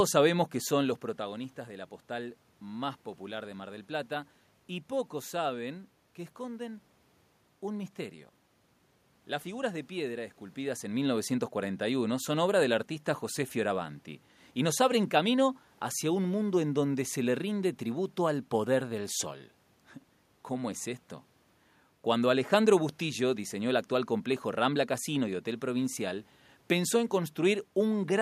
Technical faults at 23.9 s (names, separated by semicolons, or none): none